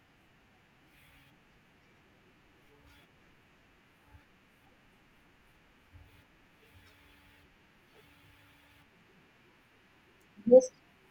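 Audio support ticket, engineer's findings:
No technical faults found.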